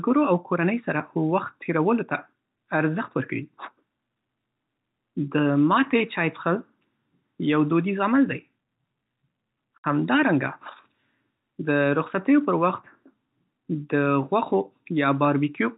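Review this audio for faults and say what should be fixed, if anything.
At 9.78 to 9.84 s, packet loss filled with silence: a run of packets never reached the receiver, and the receiver inserted plain silence instead of concealing the gap. The speech drops out abruptly for 60 ms, which fits three consecutive 20 ms packets, and both edges of the hole are hard cuts. The narrow band of the G.711 telephone coding stays unchanged across the gap. To prevent it, enable packet loss concealment or forward error correction at the receiver.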